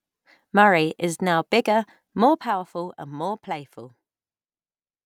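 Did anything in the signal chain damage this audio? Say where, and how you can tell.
Yes. A gain stage in the processing path stepped the level down in 1 dB increments with no smoothing, producing zipper noise from 2.14 to 2.58 s. The speech drops about 10 dB through roughly 40 small clicks per second, heard as a ticking zip.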